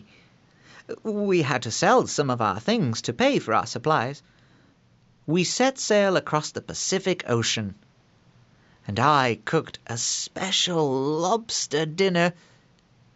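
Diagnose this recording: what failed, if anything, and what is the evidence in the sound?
Nothing failed at any stage between capture and playback, and no fault can be heard anywhere in the recording.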